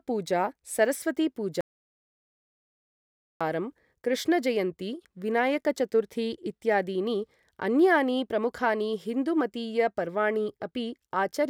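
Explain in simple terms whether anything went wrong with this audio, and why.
Something did go wrong: there's an audio dropout to silence from 1.61 to 3.41 seconds. The speech just stops dead for about 1.8 seconds, with not even background hiss, then picks up again. The input likely got cut off while recording carried on.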